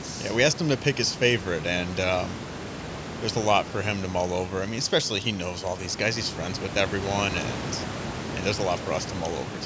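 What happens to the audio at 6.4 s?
At 6.4 s the speech carries on intact, with no dropout, glitch or distortion, only the room noise about 11 dB below the voice and the normal band limit of the call microphone processing.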